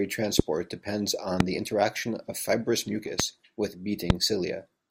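A voltage pulse, likely from a switch or static discharge, hits the speech path four times, causing a loud pop roughly 25 dB above the voice at 0.39–0.42, 1.40–1.43 (just before "the interaction of fibrous"), 3.20–3.22 (right after it), and 4.10–4.12 s, each a single sharp pop over continuing speech.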